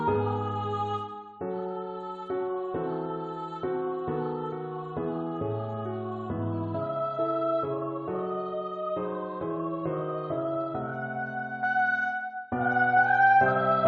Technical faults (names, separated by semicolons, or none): none